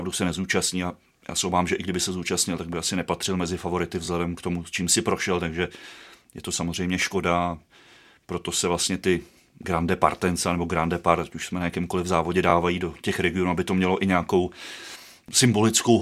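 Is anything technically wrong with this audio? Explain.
Yes, there are two kinds of fault in this speech clip.

A loud pop occurs from 2.73 to 2.75 s. A single sharp click rises roughly 5 dB above the speech. It is likely a voltage spike, from a switch, static or a driver glitch, entering the signal path, while the speech continues unbroken beneath it.

A repeated buffer occurs twice, from 4.06 to 4.08 s and from 12.50 to 12.52 s. Each time, the playback device missed its next block of audio and replayed the previous 20 ms segment once, with a hard seam. The result is a brief stutter, and no speech is lost.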